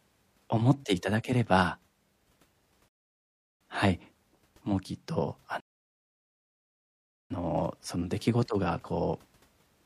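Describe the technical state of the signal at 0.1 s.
At 0.1 s the speech signal is intact, with no audible fault at that moment.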